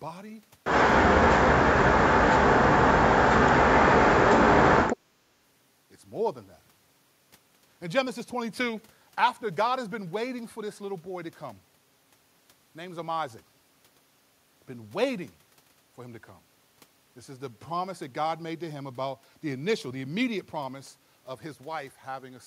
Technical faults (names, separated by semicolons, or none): speech suppressed in double talk